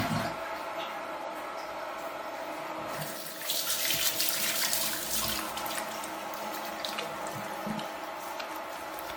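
From start to finish, the everyday sound carries generation loss. The texture swirls and smears, and the tone has a hollow, scooped quality. Sharp onsets are blurred rather than crisp. Content still reaches up to about 20 kHz, so this is not simple band-limiting. The likely cause is repeated lossy re-encoding, around seven passes. That fits an AAC-LC chain at 96 kbit/s. Each pass quantises on a shifted frame grid, so noise and spectral gaps pile up.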